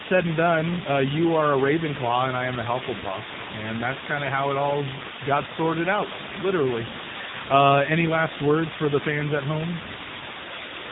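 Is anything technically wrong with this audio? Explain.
Yes, two faults run through the whole clip. An unreliable data bit is the first: one marginal data line flips at random, adding equal-sized spikes heard as a constant crackling fizz that continues through the pauses. The second is the AMR narrowband mobile codec: heavy coding at a low rate, which fits about 6.7 kbps, cuts everything above 3.8 kHz and leaves the speech muffled, buzzy and synthetic.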